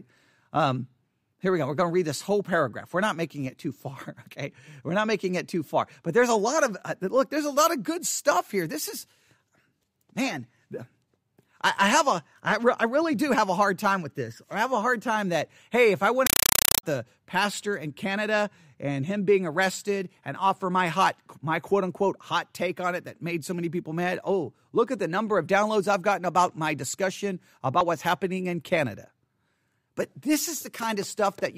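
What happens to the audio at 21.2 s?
Nothing goes wrong at 21.2 s; the audio plays through that moment intact, with no dropout, click or other fault.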